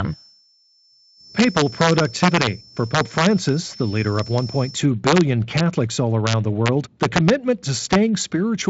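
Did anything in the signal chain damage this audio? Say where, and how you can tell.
Yes. From 0.0 to 4.85 s a feedback whistle sits behind the speech as a steady, thin tone at 5.3 kHz, well below the speech and swelling and fading slowly in level. The stage is acoustic or analogue: the likely cause is a loudspeaker-to-microphone loop held just at the edge of instability, so one frequency keeps ringing without building up. On a spectrogram it shows as a narrow horizontal line at 5.3 kHz that ends at 4.85 s.

Integer overflow appears in seven bursts: 1.39–2.47 s, 2.95–3.49 s, 4.19–4.38 s, 5.07–5.21 s, 5.57–5.60 s, 6.27–7.30 s and 7.93–7.95 s. The peaks are driven up to about 5 dB past full scale, and the wrapped ones crack violently rather than sounding flattened. This points to a fixed-point gain or sample-format conversion stage that lets samples wrap to the opposite sign instead of saturating. 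On the waveform, crests jump from the top rail straight to the bottom. On a spectrogram they appear as full-band vertical streaks that reach the 7.7 kHz ceiling of the Speex-coded band.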